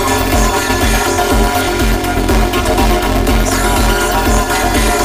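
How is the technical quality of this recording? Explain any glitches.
The technical quality is poor, with one fault present throughout.

Planar audio read as interleaved: each 5.8 ms block, which fits a 256-sample layout, stores one channel then the other but is read as alternating pairs. The sound takes on a robotic buzz at about 172 Hz. A spectrogram shows dense vertical striations and a harmonic comb spaced at 172 Hz.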